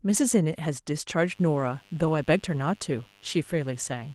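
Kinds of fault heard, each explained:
Mains buzz: spikes twice each 50 Hz cycle add a raspy buzz about 30 dB under the speech, showing as stacked harmonic lines on a spectrogram.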